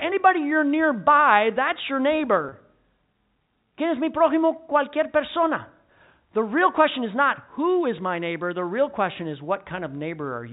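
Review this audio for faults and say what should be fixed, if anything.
At 2.49 to 2.52 s, just after "you're nearby that's your", there is packet loss with pitch repetition. About 30 ms of audio went missing, which fits a single lost packet. The receiver bridged the hole by looping the last pitch period, so the sound briefly holds on a slightly buzzy, frozen tone before normal speech returns. On a spectrogram, the harmonics run perfectly flat and evenly spaced across that short stretch instead of gliding with the intonation. In the waveform, the same cycle appears repeated several times. Throughout the clip, the G.711 telephone coding shows as content stopping at 4 kHz, which is expected for that format. To prevent the dropout, carry the call over a lower-loss network path, or add forward error correction so a single missing packet can be rebuilt rather than concealed.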